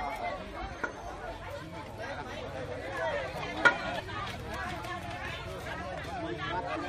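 At 0.83 s, 3.98–4.00 s, 5.59–5.61 s and 6.75–6.77 s the audio jumps ahead: compressed frames skipped. The jumps are roughly 70 ms, 70 ms, 100 ms and 200 ms, which fits whole 23.2 ms frames dropped.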